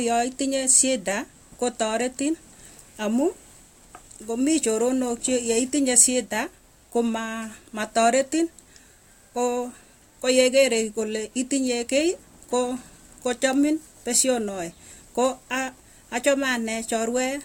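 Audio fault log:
No faults are audible anywhere in this speech recording.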